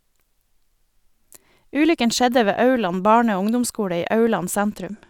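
A Bluetooth SBC bit pool drop hits the end of this speech clip: from 4.57 s, right after "og ungdomsskole i", the link appears congested and the encoder starves the upper sub-bands of bits. The treble turns dull and gritty through the close, consistent with a bit pool falling from about 31 to 13, near 94 kbps.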